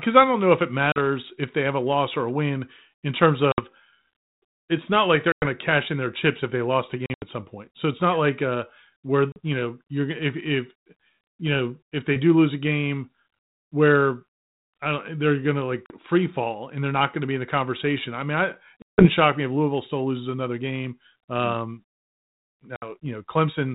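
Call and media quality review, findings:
Packet loss on an ADPCM call: hard silent gaps at 0.92, 3.52, 5.32, 7.06, 9.32, 15.86, 18.82 and 22.76 s, 40 to 160 ms each. The longest follows "conversation I mean I". Afterwards the decoder's predictor and step size mismatch the sender's, so speech resumes slightly distorted before settling. Narrowband G.726 at 32 kbit/s carries through.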